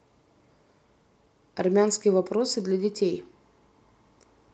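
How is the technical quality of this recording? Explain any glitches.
No glitches or technical faults can be heard here.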